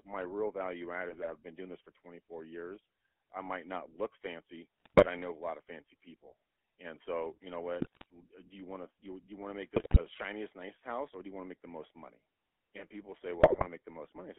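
Speech coded with the GSM full-rate codec, which fits a 13 kbps stream, loses everything outside roughly 300 Hz to 3.4 kHz and is rebuilt from a vocal-tract model fed with sparse, regularly spaced pulses, giving the whole clip a plainly audible buzzy, gravelly roughness. GSM bit errors also corrupt the decoder's filter, pitch and gain values in short bursts, so the spectrum warps and the level jumps frame by frame, breaking the speech into squawks, pops and gargling. This happens at 1.09 to 1.31 s, between "my real value add" and "I've been doing this", then at 4.80 to 5.06 s, at 7.80 to 8.06 s after "so you know", at 9.76 to 10.01 s, and at 13.40 to 13.68 s after "money and people say".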